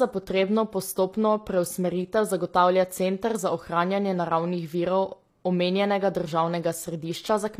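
Throughout the speech, sibilants sound gritty and lispy, with bright but synthetic treble, most likely HE-AAC compression rebuilding high frequencies, consistent with roughly 24 kbps.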